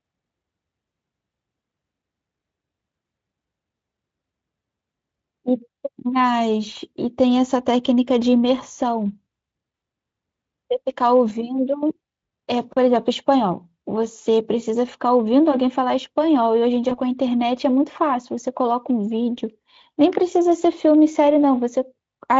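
At 16.89 s there is VoIP packet loss concealed by the speech codec. About 20 ms of audio went missing, which fits one lost Speex frame. The decoder extended the last pitch and filter at falling gain. The gap becomes a brief stretched sound, and the speech stays weak or distorted until 16.96 s.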